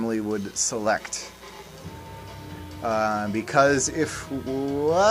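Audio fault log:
0.00–1.83 s, mains buzz: Sharp switching spikes from a 60 Hz mains supply, from a dimmer, rectifier or gap in shielding, leak into the signal path twice per mains cycle, so the interference repeats 120 times a second. Because the spikes are so abrupt, they carry a dense stack of 60 Hz harmonics reaching well into the kilohertz range, heard as a steady, raspy buzz sitting roughly 25 dB under the sound before it stops at 1.83 s.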